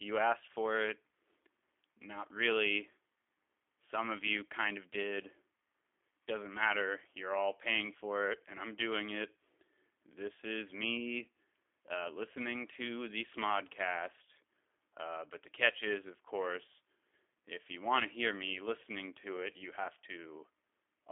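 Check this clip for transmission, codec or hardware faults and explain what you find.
One codec fault runs through the whole clip. The speech sounds thin, slightly rough and synthetic, with a plainly audible buzzy, processed edge. It is confined to a narrow telephone band of roughly 300 Hz to 3.5 kHz, and nothing is heard above 3.8 kHz. This is G.729 codec coding, consistent with an 8 kbit/s G.729A stream. Instead of the waveform itself, the codec sends a vocal-tract filter, a pitch predictor and a handful of pulses per short frame. The speech is rebuilt from that sparse model, which leaves this artificial texture.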